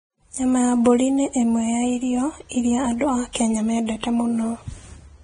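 From the first moment to the end, the speech carries a hissy, grainy texture with roughened tone and softened consonant edges, the mark of heavy Vorbis compression, likely at a low bitrate of around 21 kbps. The encoder keeps a smooth outline of the spectrum but quantises the upper detail so coarsely that it turns to noise. On a spectrogram, everything stops sharply at about 9.7 kHz, and the band below that edge looks speckled and patchy instead of finely structured.

From 3.33 to 3.35 s, a pre-echo appears: a brief hiss of about 25 ms runs ahead of a sharp onset, and the attack itself sounds smeared. The codec spread the quantisation noise meant for the loud onset across its whole transform block, so it also filled the quiet moment just before. On the waveform, a fuzzy stretch of noise leads into the transient. On the spectrogram, a thin broadband smear precedes the attack's vertical edge.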